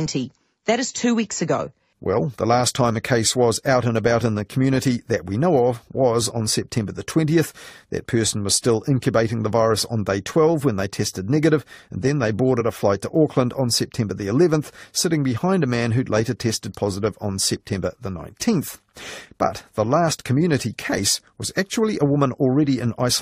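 At 12.60 s the decoder loses compressed frames, either missing from the file or discarded as damaged, so compressed frames are skipped and about 20 ms of the speech never plays. The speech jumps forward at that point.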